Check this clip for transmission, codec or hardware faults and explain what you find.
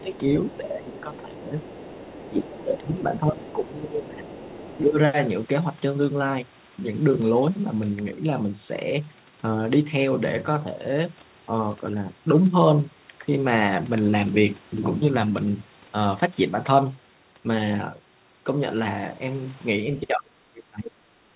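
Two faults stand out, both concentrated where the two sides of the call overlap. The audio is band-limited with nothing above 4 kHz, which fits a G.711 mu-law path at 64 kbps.

Other side's voice leaking through: a second, quieter voice sits under the speech from 0.0 to 2.63 s, again briefly at 3.45 to 3.53 s, and from 4.32 to 4.8 s. It runs at about 20 dB below the main talker, and about 25 dB below in the short middle burst. The likely cause is the far end playing on the talker's loudspeaker and getting back into the microphone past an echo canceller that did not fully remove it. It differs from ordinary background talk because it is the other side of the call coming back, in a longer stretch and then in short scraps rather than as a steady room voice.

Speech suppressed in double talk: from 0.01 to 4.98 s, about four seconds in total, the main talker dips by up to roughly 15 dB. From 19.84 s to the end the dips go much deeper, around 30 dB. 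This points to the echo canceller turning everything down while both sides spoke at once. Packet-loss dropouts are short, clean gaps. These are dips in level, and they overlap the leaked voice in the first five seconds.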